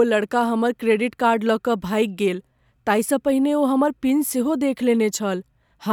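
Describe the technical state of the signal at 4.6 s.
At 4.6 s the speech signal is intact, with no audible fault at that moment.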